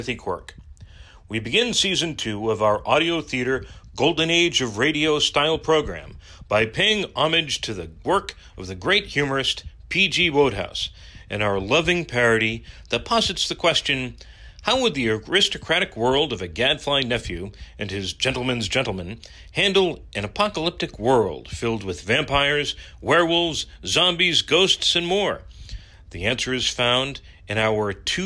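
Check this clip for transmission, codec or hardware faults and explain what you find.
No transmission, codec or hardware faults turn up in this clip.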